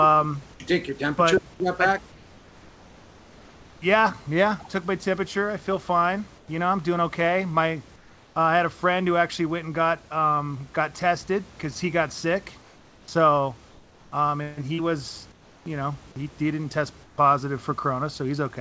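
Discontinuous transmission likely stopped the sender during pauses, so the receiver substituted comfort noise in place of the background at 2.12–3.82 s after "your temperature but back", 6.38–6.48 s, 7.96–8.36 s, 12.62–13.08 s, 13.70–14.12 s before "um and he was", 15.32–15.66 s before "know he he didn't", and 17.04–17.18 s. Each pause drops about 3–4 dB into flat, featureless hiss.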